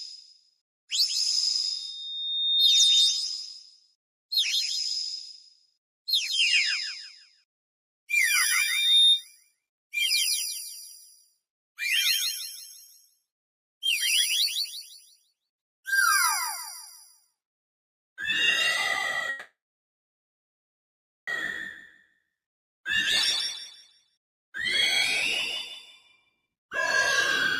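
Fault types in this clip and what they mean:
Loudspeaker feedback squeal: The microphone is picking up the loudspeaker it feeds, and at 3.7 kHz the loop gain climbs past one, so that frequency keeps reinforcing itself. A single piercing tone swells out of the sound from 1.62 to 3.33 s, building over roughly a second to about 10 dB above the program level. It returns from 8.47 to 9.25 s, rising faster this time, in about half a second.
Call audio freeze: Packets were most likely held up in transit, leaving the receiver's jitter buffer with nothing to play. At 19.29 s the last bit of sound is stretched into a brief fading buzz, then about 1.73 s of silence follows, with roughly 2 s filled in total before playback resumes at 21.29 s. Nothing is lost; the sound simply picks up where it stopped, now running about 2 s later than before.
Jitter buffer speed-up: The receiver had more audio queued than its target, so it trimmed short pitch-period-length slices in quick succession to bring the delay back down. 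From 26.47 to 27.01 s the sound runs at about 124% of its normal rate while the pitch stays the same, with about 150 ms squeezed out. The result is a brief, hurried-sounding stretch near the end of the clip.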